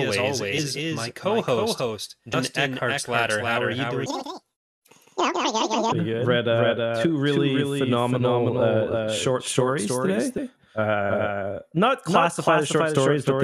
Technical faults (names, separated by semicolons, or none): doubled audio track; compressed frames skipped; section at the wrong speed